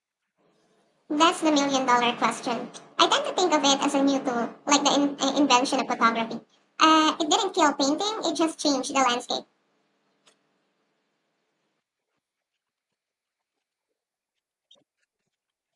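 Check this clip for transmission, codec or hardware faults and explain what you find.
There's one fault, and it runs through the whole speech clip: a wrong sample rate. The audio is played back 1.5 times faster than it was captured, which fits 16 kHz material going out at 24 kHz with no conversion. Speed and pitch both rise, by about 7 semitones, so voices come out high and hurried.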